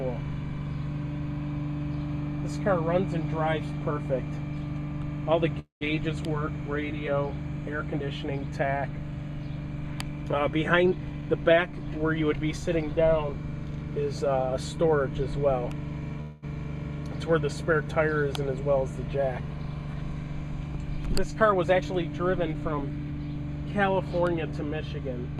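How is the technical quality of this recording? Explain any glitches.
The recording has two kinds of network-related glitch: two call audio freezes and two jitter buffer speed-ups.

Call audio freeze, at 5.59 to 5.83 s and 16.21 to 16.44 s: the jitter buffer likely ran dry while packets were delayed in transit. The receiver covered each wait, about 215 ms and 212 ms, by extending the last sound. In the first, that extension decays into roughly 130 ms of silence. In the second, it carries straight through as a fading sound. The sound then resumes where it stopped, with nothing lost, and sits about 0.2 s later.

Jitter buffer speed-up, at 10.75 to 12.20 s and 21.64 to 23.19 s: each time the buffer held more than its target, so the receiver trimmed away tiny pitch-period slices repeatedly to catch up, about a fifth of a second each time. Playback runs at about 114% and 113% of normal speed with the pitch unchanged. 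Both stretches sound briefly hurried.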